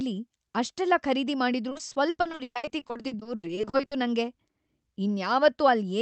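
From 1.69 to 3.93 s there's repeated packet loss that gives a robotic sound. Dozens of short holes, the longest about 120 ms, get patched by stretching the last bit of audio. Nearly half that stretch is filler, so it turns choppy, over a call-codec band that tops out around 8 kHz.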